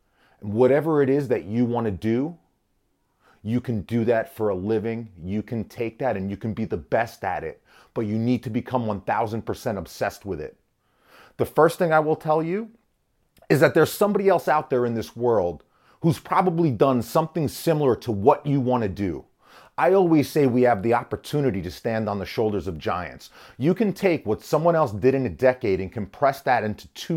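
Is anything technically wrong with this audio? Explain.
Yes, the speech carries two dropped samples faults, heard as isolated clicks at 1.2 s, between "whatever it" and "that you want to", and at 20.3 s, between "to do I always" and "say we have the". Each is likely a loss of a tiny fraction of a millisecond of samples, so the waveform jumps abruptly to a later value. No sound goes missing, only a sharp tick. On a spectrogram each appears as a thin vertical line spanning all frequencies. In the waveform it is a single-step discontinuity.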